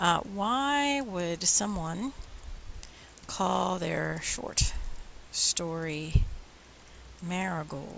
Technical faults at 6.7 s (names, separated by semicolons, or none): none